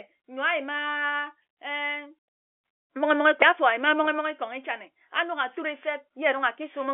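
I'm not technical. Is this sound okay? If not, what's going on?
Yes, no faults here.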